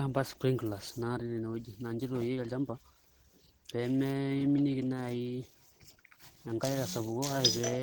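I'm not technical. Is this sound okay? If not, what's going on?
No. Throughout the speech, it sounds plainly hoarse, rough and grainy, most likely from Opus compression squeezing it hard. Unlike MP3 damage, there's less watery swirling, and the highs aren't cut away; the texture just turns coarse.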